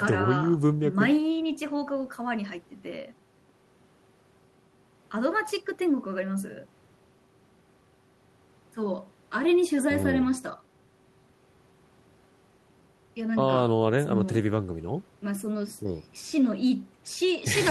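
No technical faults can be heard in the recording, and the signal stays steady and intact throughout.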